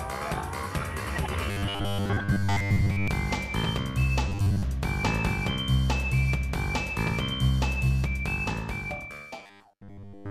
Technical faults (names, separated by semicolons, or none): robotic sound from repeated short buffers